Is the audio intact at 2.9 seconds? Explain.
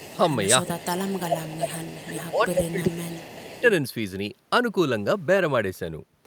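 No. From 2.1 to 3.59 s the speech dips and breaks up, falling by roughly 20 dB at its deepest, with about a second affected in total. This is speech suppressed in double talk: with both sides talking, the echo canceller likely mistook this talker for loudspeaker echo and turned it down. Overlapping that, from 2.48 to 3.61 s, a faint copy of the speech trails 385 ms behind at about 20 dB below it. This is echo leak, likely residual loudspeaker pickup the far end's canceller failed to remove.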